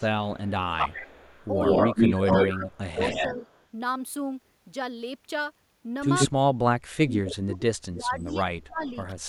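From 0.0 to 3.43 s the speech dips and breaks up for roughly two seconds in total, falling by around 20 dB at its deepest. This is speech suppressed in double talk. The likely cause is an echo canceller that could not tell the near talker from loudspeaker echo while both sides were active, so it turned everything down.

Overlapping this, from 0.79 to 3.65 s, there is echo leak. A copy of the voice trails it by 136 ms and sits about level with the speech or slightly above it. The likely cause is loudspeaker pickup that the far end's canceller did not remove.

A short echo burst follows at 6.19 to 6.29 s, again 136 ms behind the voice.

From 6.29 s to the end, suppression returns more severely. The drops reach around 35 dB over roughly two seconds.

Within that stretch, from 7.94 to 8.92 s, a fainter echo 134 ms late sits well below the speech.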